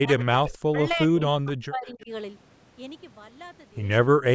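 A speech recording with speech suppressed in double talk from 0.0 to 2.1 s: the level drops by up to roughly 40 dB, about one and a half seconds in all, with another brief dropout at 4.15 to 4.2 s. The likely cause is an echo canceller ducking the talker while the far side spoke. On a waveform these show as sudden collapses of the envelope, and on a spectrogram as near-empty gaps where the energy across the band disappears. There are two bursts of echo leak: 0.19 to 0.24 s, delayed about 280 ms and roughly 20 dB below the speech, and 1.86 to 2.02 s, delayed about 284 ms and roughly 30 dB down. These likely come from a loudspeaker echo the far end's canceller failed to remove. A spectrogram shows faint copies of earlier harmonic patterns trailing by that delay. The band stops at 8 kHz, consistent with call microphone processing.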